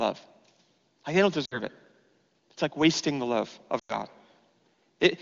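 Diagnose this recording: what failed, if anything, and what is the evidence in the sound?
Network stage: lost AMR speech frames on the radio link. At 1.45–1.59 s, after "they don't", and 3.79–3.96 s, after "like wasting the love", the wideband decoder concealed about 60 ms and 100 ms, repeating stale pitch with falling gain. Spectrograms show frozen harmonics fading dark; waveforms taper, then restart weakly.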